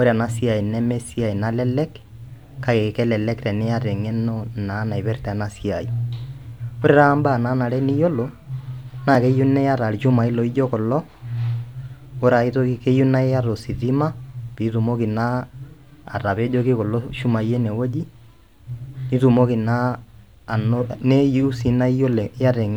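At 9.15 s there's a block of digital silence in the speech, just a hair under a millisecond and a half. The output buffer likely wasn't filled in time, so a tiny chunk of samples went out as zeros, which fits a 64-sample block. Since the audio drops to zero and comes back with no fade, both edges land almost on top of each other, and you hear a single sharp tick rather than a gap.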